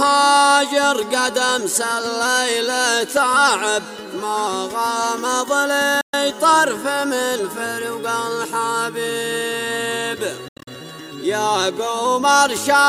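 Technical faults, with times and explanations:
6.01–6.14 s Bluetooth dropout: the sound cuts out for 120 ms and picks up further along, as if it had played on silently. The likely cause is audio packets reaching the headphones too late and being dropped.
10.48–10.68 s Bluetooth dropout: a cluster of gaps totalling about 147 ms across 187 ms, the longest 80 ms, with the sound skipping ahead after each. The likely cause is late packets being discarded.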